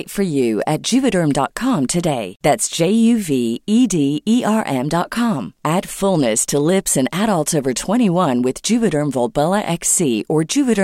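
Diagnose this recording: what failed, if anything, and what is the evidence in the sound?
Nothing failed here: listening through the speech, there's no point where anything in the chain gives itself away, so there's nothing to diagnose.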